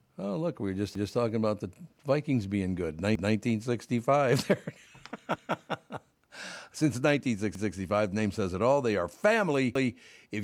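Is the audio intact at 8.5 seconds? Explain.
Yes, the audio is intact at 8.5 seconds, without any audible dropout, click, distortion or other technical fault.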